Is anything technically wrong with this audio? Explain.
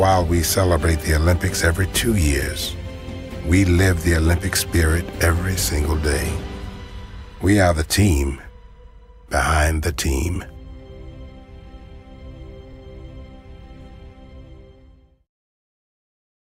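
No, no technical faults.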